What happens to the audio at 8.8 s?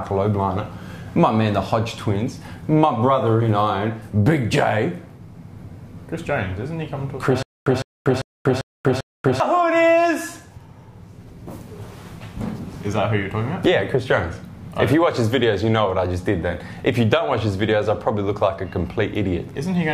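At 8.8 s the audio is inside a stutter with silent gaps running from 7.43 to 9.40 s. A 157 ms fragment repeats five times at a steady 395 ms period, each repeat followed by about 238 ms of dead silence, and the material that belonged there never plays. The likely cause is a stalled player or stream replaying its last buffered chunk on each retry. On a waveform this shows as identical blocks separated by flat, near-silent gaps. A spectrogram shows a regular comb of matching slices with black columns between them.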